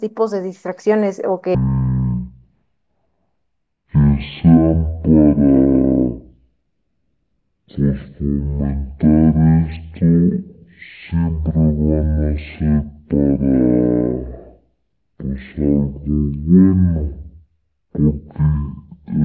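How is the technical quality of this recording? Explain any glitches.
The quality takes a big hit early on. From 1.55 s to the end there's a wrong sample rate problem. The audio plays at about 0.36 times its proper speed and drops about 17.6 semitones, so the speech comes out deep, dragging and murky. Speed and pitch falling together by that ratio fits 44.1 kHz material being played back at 16 kHz with no conversion.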